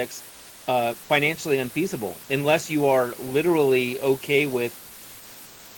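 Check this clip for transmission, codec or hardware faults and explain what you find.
Two things stand out. Throughout, there's low bit depth with dither: only about 6 bits are in use, and the dithered rounding error becomes a constant, even hiss roughly 20 dB under the speech, with no distortion. At 0.29–0.67 s, just before "uh financially unfeasible unless", and again at 5.45–5.75 s, there's comfort noise in place of the background. Discontinuous transmission, likely Opus DTX, stopped sending during the pauses, and the receiver filled them with smoother synthetic noise about 3 dB quieter than the real room noise around it.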